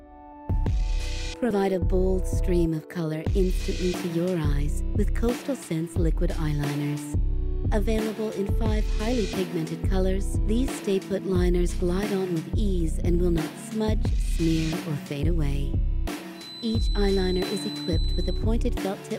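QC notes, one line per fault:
16.31–18.48 s feedback whistle: thin 4 kHz tone around 15 dB below the sound, a narrow horizontal spectrogram line; likely speaker-to-microphone loop near feedback.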